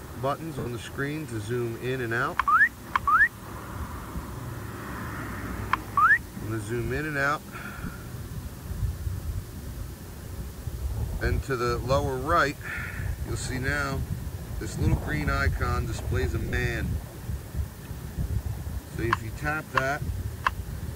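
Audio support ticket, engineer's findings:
Low bit depth with dither throughout. Constant even hiss, roughly 20 dB under signal, no distortion. Fits about 7-bit quantisation.

Lost LE Audio frames at 0.59–0.66 s, 7.86–7.89 s, 10.25 s, and 16.43–16.53 s (scattered, longest gap about 40 ms). LC3 concealment smears tones into noise, fading on longer gaps.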